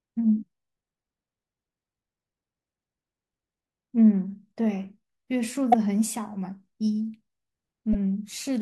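At 5.70 to 5.74 s and again at 7.91 to 7.95 s, damaged data in a compressed stream makes the decoder lose sync, leaving brief glitches.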